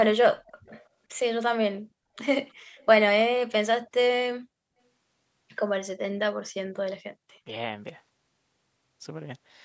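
Speech suppressed in double talk hits the opening of this speech recording, from 0.07 to 0.49 s: the voice sinks by around 40 dB for roughly 0.4 s in total, most likely because both ends were talking at once and the echo canceller, unable to tell the near talker from the loudspeaker echo, attenuated everything it heard. Echo leak follows at 0.47 to 0.87 s, then in short scraps at 2.49 to 2.53 s and 2.77 to 2.86 s. A faint copy of the voice trails it by 316 ms, roughly 30 to 40 dB down. This is likely loudspeaker pickup at the far end that its echo canceller did not fully remove and sent back. The call's microphone processing, with nothing above 8 kHz, is a normal part of the path.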